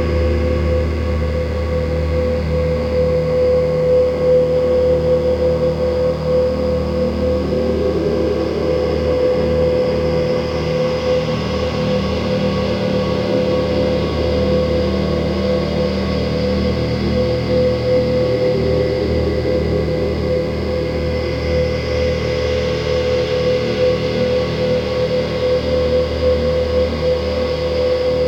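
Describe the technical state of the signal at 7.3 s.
At 7.3 s a steady, thin buzz with many harmonics sits well under the sound, as it does across the whole clip. This is DECT cordless phone buzz: a nearby DECT handset or base sends a radio burst every 10 ms, and the audio circuit rectifies it into a 100 Hz tone.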